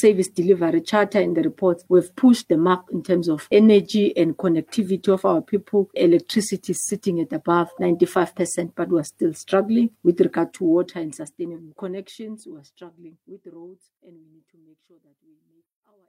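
No technical faults are audible; the level eases out in a smooth, editor-style fade from around 10 s to the end, with no click or hard edge.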